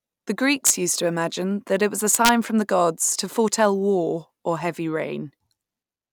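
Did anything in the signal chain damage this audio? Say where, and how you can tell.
Yes: integer overflow at the sample-format or gain stage, with cracks at 0.67–0.70 s and 2.15–2.29 s, about 3 dB and 1 dB over full scale. Waveform peaks wrap to the opposite rail instead of flattening.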